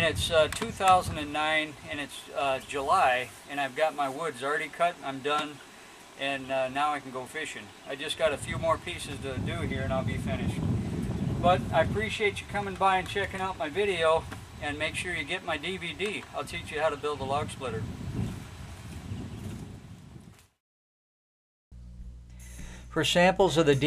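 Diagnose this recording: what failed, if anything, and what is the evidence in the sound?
Nothing in this recording stood out on listening as a problem at any stage of the chain.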